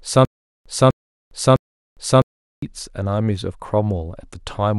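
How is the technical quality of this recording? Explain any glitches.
The recording has one clear playback fault, at the start. From 0.00 to 2.62 s, already under way when the clip begins, there is a stutter with silent gaps. A 250 ms burst of speech repeats three times every 656 ms, with about 406 ms of dead digital silence between repeats. This is likely a stalled stream replaying its last fragment at each retry, so the speech for that span is lost.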